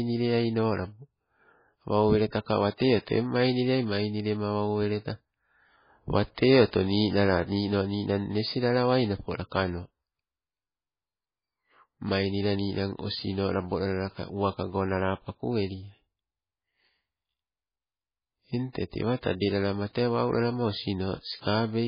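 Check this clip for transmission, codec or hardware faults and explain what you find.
One fault runs through the whole speech clip, most likely MP3 compression. Starved of bits, which fits a very low bitrate around 16 kbps, the encoder drops everything above 5 kHz and switches weak frequency lines on and off, leaving muffled, watery, swirling speech with smeared attacks.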